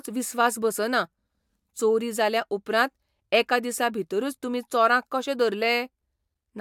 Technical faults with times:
none

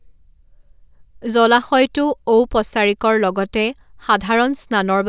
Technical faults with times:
none

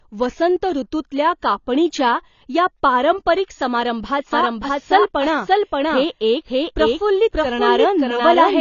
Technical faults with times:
0.00-8.60 AAC compression
4.33-8.60 doubled audio track

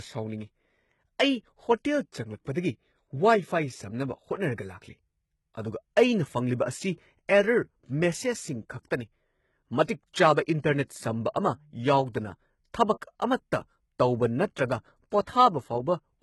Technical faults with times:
0.00-16.23 HE-AAC compression
2.53-2.56 pre-echo
9.86-9.88 pre-echo
10.87 pre-echo

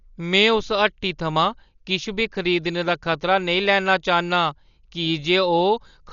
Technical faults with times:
0.00-6.13 Dolby Digital compression

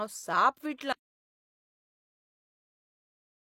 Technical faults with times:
0.93-3.44 audio dropout to silence

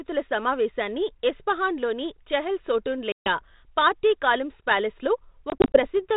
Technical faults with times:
3.12-3.42 packet loss on an ADPCM call
5.50-5.87 packet loss on an ADPCM call

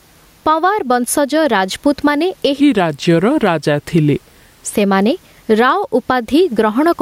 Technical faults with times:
0.00-7.01 gain pumping
2.61-4.73 section at the wrong speed

